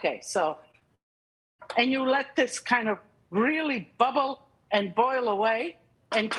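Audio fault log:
0.71–0.75 s and 0.79–0.83 s, short concealed packet loss: two 20 ms gaps are filled by extending the preceding sound, leaving brief smears rather than silence, and the audio resumes in place.
0.95–1.61 s, long network dropout: after a fading continuation of the last sound the audio falls to near silence for about 0.6 s, likely from about 640 ms of audio never arriving, and it resumes with that portion missing.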